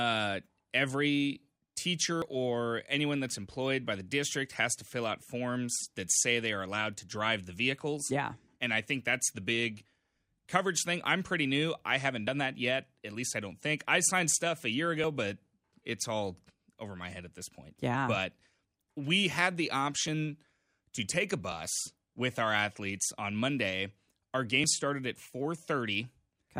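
At 2.22, 12.28, 15.04, 20.08, 21.52 and 24.64 s the speech jumps abruptly forward, most likely a dropped buffer (overrun): samples were overwritten before the program read them, so the two sides are spliced directly together. The lost stretches are roughly 70 ms at the first and last points, around 40 ms at 15.04 s, and about 20 ms elsewhere. Unlike an underrun, no silent gap or repeat appears, only a skip.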